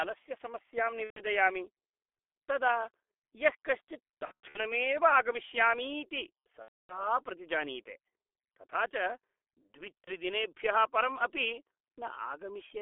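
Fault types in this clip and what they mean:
G.723.1 codec: The speech sounds muffled, hoarse and boxy throughout, with smeared consonants and nothing above about 3.5 kHz or below 300 Hz. This is heavy damage from a low-rate telephony codec modelling the voice coarsely in 30 ms frames, which fits a rate near 6 kbit/s.
VoIP packet loss concealed by the speech codec: At 1.04, 4.25, 6.62 and 10.04 s the speech stretches into a buzzy tone or coloured noise that fades, worst around 6.6 s, then stays weak briefly. The decoder is filling gaps of 30 to 270 ms from its last pitch and filter.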